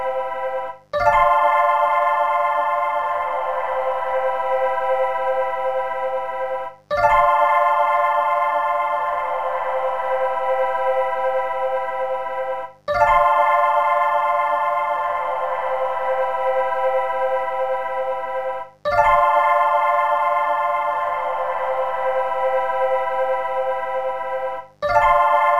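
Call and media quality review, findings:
Mains buzz, whole clip. Steady raspy buzz on a 50 Hz base, harmonics climbing into the kHz range, sitting roughly 40 dB under the signal. Sharp switching spikes twice per mains cycle, so probably a dimmer, rectifier or unshielded cable letting interference into the chain.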